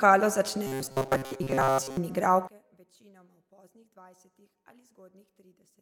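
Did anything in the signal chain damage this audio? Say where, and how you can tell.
Yes. Robotic sound from repeated short buffers runs from 0.67 to 1.97 s, at the driver or buffer stage. The voice becomes a rigid, metallic buzz fixed at 134 Hz, loosely following the speech contour, with most of that stretch made of repeats. A steady pitch that ignores the talker points to one short block, about 7.5 ms, being replayed over and over. This is likely because fresh audio arrived too slowly and the real samples were dropped.

One channel inverted affects the audio from 2.47 s to the end, likely from a polarity-swapped lead in the analogue wiring or a sign error in conversion. On mono playback the level falls by about 28 dB, and only a faint trace of the voice remains. That deep drop happens because the centred speech is identical in both channels. With one side flipped, the summed signal cancels and leaves only the small left-right differences.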